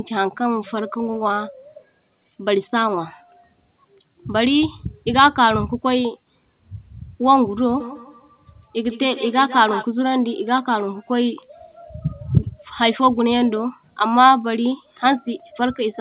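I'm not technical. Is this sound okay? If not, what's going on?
No. From about 7.8 to 9.9 seconds the speech is followed by a quick repeat of itself, coming back roughly every 0.15 seconds, thinner and more ringing. That is feedback echo between two devices. Two phones or computers in the same room were on the same call, and one played the other's audio out loud. That microphone picked it up and sent it round again, and its echo canceller couldn't remove sound from the other device's speaker.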